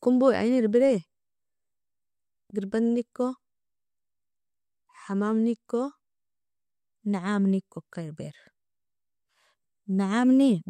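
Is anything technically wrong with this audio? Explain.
No, nothing technically wrong can be heard in this speech recording; the signal holds steady and intact throughout.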